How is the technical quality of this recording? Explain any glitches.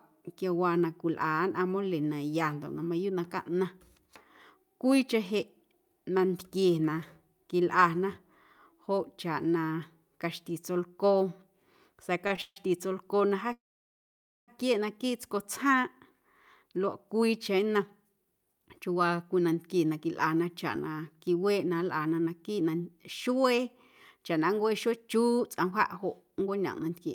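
The recording has a cluster of network-style glitches around 12 to 14.5 s, followed by two stretches where the audio is noticeably rushed.

Short stalls from a late packet hit at 12.27 to 12.32 s and 12.36 to 12.40 s, right before "tsolcoo na". Each time a packet was late and the jitter buffer ran dry, so the last sound got stretched by about 25 ms and then 17 ms, leaving a faint held buzz but nothing lost.

Call audio freezes follow at 12.42 to 12.58 s, again just before "tsolcoo na", and at 13.53 to 14.50 s, right after it. The likely cause is packets stuck in transit. The receiver carries the last sound forward as a fading buzz, then drops to silence: about 40 ms in the first freeze and about 0.9 s in the second. When the packets arrive, the audio picks up where it left off, so you get a gap rather than a loss.

Jitter buffer speed-up runs from 16.63 to 23.74 s at about 108% speed, and from 24.17 to 27.09 s at about 106%. 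The buffer held more audio than it aims for, so the receiver trimmed tiny pitch-period slices to catch up. That took out roughly half a second and then about a fifth of a second. Pitch holds steady, but the speech sounds hurried.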